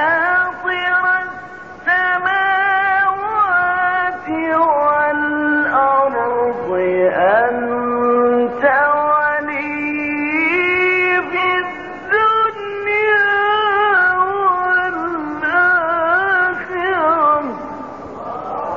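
No technical faults occur anywhere in the audio.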